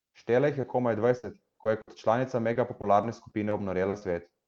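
At 0.61 to 0.65 s there is a brief smear as about 20 ms of audio goes missing. This is short concealed packet loss: the receiver patched the hole by extending the preceding sound.

From 1.17 to 1.89 s the speech turns choppy and robotic, with pieces dropping out. This is repeated packet loss. Several gaps, the longest about 60 ms, add up to 160 ms that had to be synthesised, roughly a fifth of that stretch.

The same robotic chop returns more lightly from 2.53 to 3.53 s. Here the gaps are each about 20 ms and total 100 ms, about a tenth of the span.

Short concealed packet loss then causes two quick wobbles close together. The first, at 3.89 to 3.95 s, fills about 40 ms. The second, at 3.99 to 4.03 s, fills about 20 ms. In both, the last sound was continued before the real audio was blended back in.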